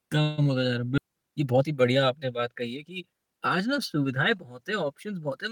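At 0.97 to 0.99 s there is a skip ahead. Roughly 0.7 s of speech was dropped while later audio was already queued. Playback jumps straight forward with no gap filled. The two sides join almost directly, so part of the speech simply vanishes.

From 1.07 to 2.91 s comes a jitter buffer speed-up. The buffer held more audio than it aims for. The receiver trimmed many tiny pitch-period slices, about a fifth of a second in total. Speech runs at 112% speed, at unchanged pitch, and sounds hurried.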